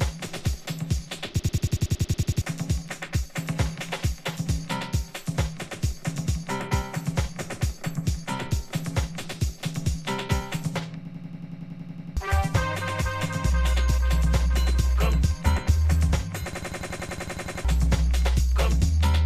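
Three system hang loops, at 1.39–2.42 s, 11.05–12.17 s and 16.53–17.65 s, replay one 92.9 ms slice as a 10.8 Hz stutter. This fits a frozen system cycling a 4096-sample ring buffer, dropping about a second of audio each time.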